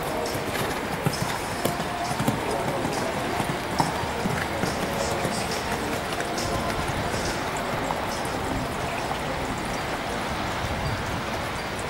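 From 2.64 s to 8.66 s there's a run of periodic USB or driver dropouts, with something stalling the audio path every 62 ms. Each time a couple of milliseconds are skipped outright, giving around a hundred evenly spaced ticks that sound only while there's signal.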